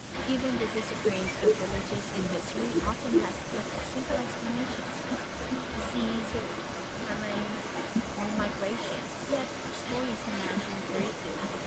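From 0.12 s to the end of the clip, a delayed second copy of the speech runs under the original, trailing it by about 0.4 s and only a few decibels quieter. This is an echo leak, likely from a far end playing the call on a loudspeaker where the echo canceller failed to suppress what its microphone picked up and sent it back. The echo shares the 8 kHz band limit of the Opus call path.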